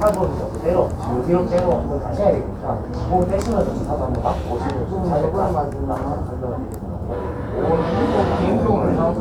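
Nothing goes wrong anywhere in this recording of sounds; there's no technical fault to point to at any moment.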